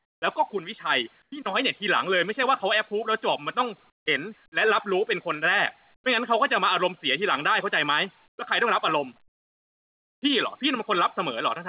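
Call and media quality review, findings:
Comfort noise in place of the background, likely from discontinuous transmission: receiver inserts smooth synthetic noise, about 10–11 dB quieter, at 0.00–0.22, 1.22–1.32, 3.90–4.06 and 8.28–8.38 s. Nothing above 4 kHz, consistent with a G.711 A-law call path.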